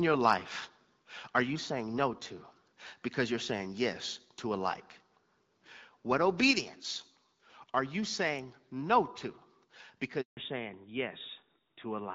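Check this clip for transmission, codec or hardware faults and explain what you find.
Three faults turn up: a brief microphone overload early on, then a handover gap near the end that leads straight into a fallback to narrowband for the rest of the call.

Microphone overload, 1.37 to 1.39 s, just before "you saying no to". The likely cause is an input gain set too high, so the loudest peaks ran into the converter's ceiling by about 2 dB. Only a small fraction of samples in that instant were flattened. The waveform tops were sheared off rather than rounded, which is heard as a short, harsh crackle riding on the loudest syllable for about 20 ms.

Handover gap, 10.21 to 10.37 s. The call was passed from one network link to another, and no speech frames arrived while the switch was under way. The sound fades out within a few tens of milliseconds and the line stays silent for about 160 ms until the new link picks up. 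Whatever was spoken in that window is lost outright, not muffled.

Fallback to narrowband, from 10.37 s to the end. When the call came back after the handover, it had dropped from the HD Voice wideband codec to an older narrowband one, which fits a switch from AMR-WB at 12.65 kbit/s to AMR-NB at 12.2 kbit/s. Nothing above 4 kHz survives. Sibilants and breath lose their crispness, and the speech turns duller and rougher, with a boxy, old-telephone quality. Before this point the wideband codec still carried the band up to about 7 kHz.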